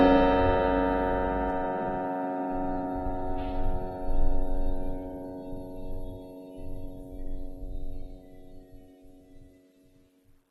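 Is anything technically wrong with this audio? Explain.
Yes, two faults are audible in this music.

From 0.0 to 1.5 s there is mains hum. Power-line current is leaking into the signal path, probably through a ground loop or a nearby transformer, and adds a steady 50 Hz tone with a few low harmonics. It sits only about 10 dB below the music, so the opening has a loud, steady low drone under it until it cuts out at 1.5 s.

Throughout the clip the music sounds dull and smeared, with nothing above 13.1 kHz and a warbling, fizzy texture on sustained sounds and on the bright, hissy parts. This is likely AAC compression at a low bitrate, consistent with AAC-LC at around 34 kbps. The encoder could not afford to code the full spectrum, so it cut off the top and quantised the rest coarsely. That coarse coding is what makes the damage plainly audible.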